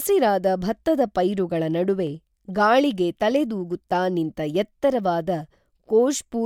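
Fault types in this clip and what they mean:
Clock drift buffer slips: A click recurs every 1.24 s, 0.83 to 5.80 s. Likely mismatched clocks dropping or repeating a few samples each time.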